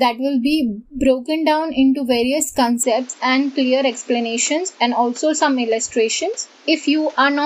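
An input switch to a poorer device, likely, at 2.83 s to the end: the audio abruptly dulls, losing everything above 7.6 kHz, with a new faint noise floor and no gap.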